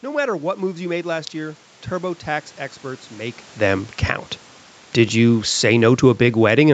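Speech recorded through a call path, with nothing above 8 kHz. From 5.16 s to the end, automatic gain falling sets in. The gain control judges the input too loud or its background noise too strong and turns its gain down step by step. The speech and the room noise behind it sink together.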